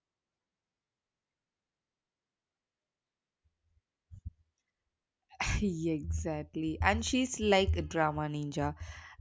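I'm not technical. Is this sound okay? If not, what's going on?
Yes, this sound is okay, and there's nothing going on with it that needs attention.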